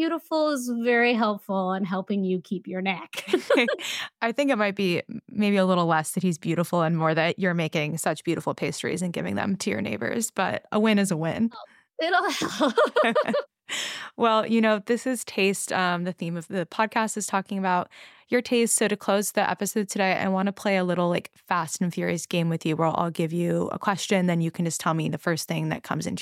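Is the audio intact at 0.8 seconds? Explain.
Yes, the speech at 0.8 seconds plays through intact, with no dropout, click, distortion or other fault at that moment.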